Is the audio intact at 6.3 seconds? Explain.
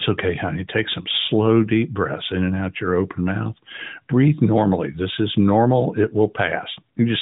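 Yes, the audio is intact at 6.3 seconds, carried through the AMR-NB narrowband mobile codec, which passes nothing above 3.8 kHz.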